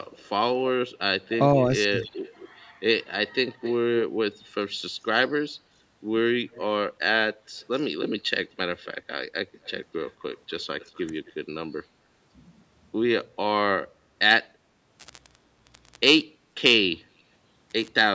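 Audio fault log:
0.17–0.29 s, 1.29–2.49 s, 3.28–4.03 s, 6.51–6.65 s, 7.58–7.85 s, 8.46–8.86 s, 9.64–11.33 s, echo leak: a delayed copy of the speech trails the original by about 0.22 s at first, drifting to about 0.25 s by the last stretch. It is mostly far below the speech, about 25 to 35 dB down, rising to about 15 dB down at 3.28 s. The likely cause is a far-end speakerphone whose echo canceller let part of the playback back into its microphone. Unlike room reverberation, it is a distinct repeat rather than a smooth tail.
16.24–16.55 s, background gated by the echo canceller: the room sound sinks by up to about 18 dB for roughly 0.3 s and then returns. The canceller clamped the microphone hard while its loudspeaker was playing, taking the ambience down with it. Unlike a network dropout, there is no cut, glitch or gap in the signal itself; only the background level dips and recovers once the canceller releases.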